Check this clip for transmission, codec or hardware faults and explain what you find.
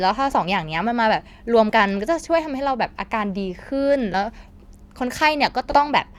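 The speech has compressed frames skipped at 0.31–0.36 s, 1.69–1.72 s, 4.13 s and 5.71–5.78 s. Missing or rejected frames make the audio jump ahead by one, about three, one and about two frames, consistent with 20 ms frames. Each one is heard as a sudden jump forward in the speech.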